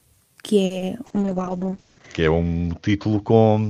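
At 0.65 to 0.72 s the speech hangs on one sound for a moment, with a slight buzz or dip, then picks up exactly where it left off. This is a short stall from a late packet: the jitter buffer ran dry, so the receiver stretched about 50 ms of the last sound until the packet arrived. Nothing is lost, but everything after plays 50 ms later.

Just after, at 0.78 to 0.82 s, there is a brief smear where a sliver of speech goes missing. This is short concealed packet loss: 20 ms of audio never reached the decoder, and the receiver filled the gap by extending the preceding sound before blending back into the real signal.

From 1.05 s to the end the speech turns rough, watery and muffled, with the crisp top end gone. This is a call bitrate drop: the encoder went from 40 kbps to 7 kbps and narrowed its bandwidth from 20 kHz to 8 kHz, staying at the lowest rate for about a second.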